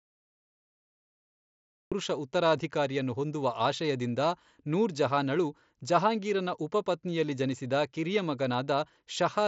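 The clip has a cut-off start. From 0 to 1.92 s there is only digital silence. At 1.92 s the speech appears all at once, already mid-sound, with "ಉತ್ತರಾಧಿಕಾರಿಯನ್ನು ಹೊಂದುವ ಆಶಯದಿಂದ ನೂರ್". There is no natural attack and no fade-in. The capture or stream began late, so the opening of the sound was never recorded. Through the Bluetooth mSBC headset path, the band stops near 7.7 kHz.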